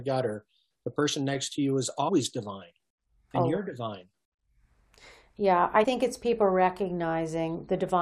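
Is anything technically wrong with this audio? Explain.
Yes. There are compressed frames skipped at 2.08 s, just after "next to you is", and at 5.83 to 5.85 s, right before "it's people". The decoder dropped whole frames, which fits about four and two frames of 21.3 ms. That's roughly 100 ms and 40 ms jumped.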